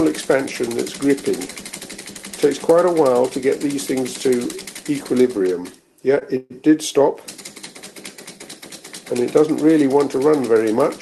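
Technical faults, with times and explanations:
6.19–6.23 s, short stall from a late packet: the last sound is held about 16 ms until the packet arrives. On a spectrogram, the held sound smears sideways, with nothing lost.
6.37–6.52 s, call audio freeze: the sound stops for 132 ms, likely because packets were held up, and continues as a fading buzz that ends in about 10 ms of near-flat silence on the waveform.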